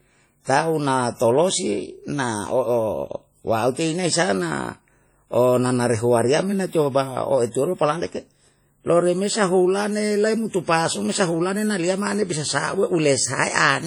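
Throughout the speech, a ringing, washy smear hangs around each sound, with a hiss that swells and fades along with the signal. This is likely WMA compression, heavily damaged at a bitrate that points to around 32 kbps, where long transform blocks spread quantisation noise and weak components vanish.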